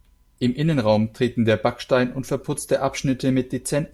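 No technical faults are audible.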